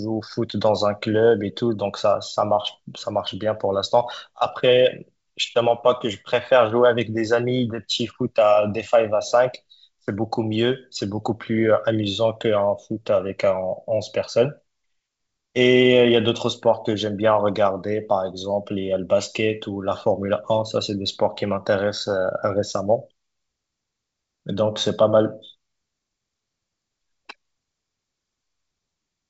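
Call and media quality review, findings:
No faults found in this speech clip; it's ordinary G.722 wideband telephone coding at 64 kbit/s, with the audio band ending around 7.7 kHz as expected.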